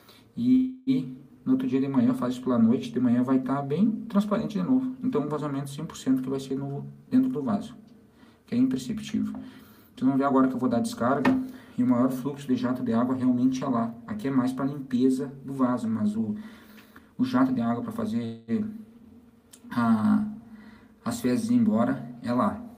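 At 0.55 to 0.90 s and again at 18.25 to 18.51 s the audio stalls into a fading buzz for about 0.31 s and 0.23 s before resuming where it left off, a call audio freeze, likely from held-up packets draining the jitter buffer, with nothing lost but a gap inserted. The sound then hurries at unchanged pitch at 6.46 to 7.04 s (115% speed), 16.14 to 16.34 s (143%) and 16.86 to 18.10 s (110%). This jitter buffer speed-up comes from the receiver cutting pitch-period slices, roughly a tenth of a second in the first two stretches and about 0.15 s in the third, to shed excess delay.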